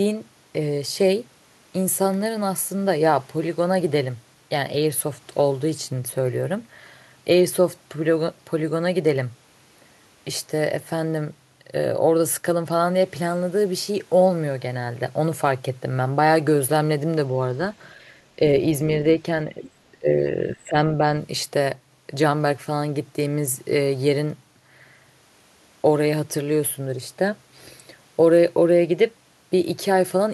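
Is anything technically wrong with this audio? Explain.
Yes. From 19.49 to 20.78 s there is speech suppressed in double talk: the level sinks by around 25 dB for about a second in total, likely because an echo canceller mistook overlapping talk for echo. The waveform shows a collapsed envelope and the spectrogram thins.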